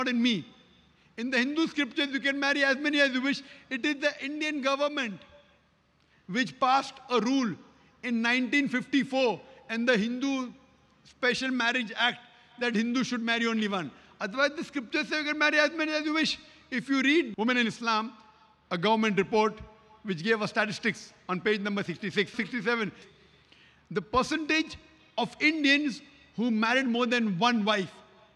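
No technical faults are audible.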